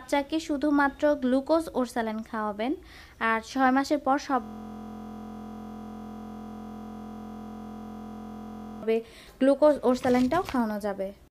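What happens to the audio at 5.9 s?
At 5.9 s the audio has collapsed into a steady, flat buzz at about 43 Hz, lasting from 4.44 s to 8.83 s. This is a system hang loop: while the system froze, the sound hardware kept replaying the same 23.22 ms ring buffer, which fits a 1024-sample buffer.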